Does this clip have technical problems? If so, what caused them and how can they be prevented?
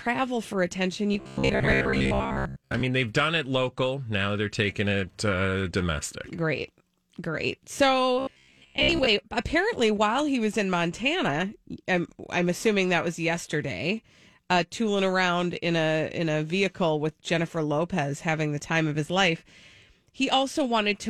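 Yes. Robotic sound from repeated short buffers appears from 1.14 to 2.81 s and again from 8.20 to 9.07 s, where the speech becomes a rigid metallic buzz at about 66.7 Hz. That pitch points to roughly 15 ms chunks being replayed in place of most of the real audio, likely because new audio arrived too seldom. A waveform shows identical 15 ms shapes repeating, and a spectrogram shows flat, evenly spaced harmonic lines at multiples of 66.7 Hz. Larger jitter buffers and steadier network or processing delivery prevent it.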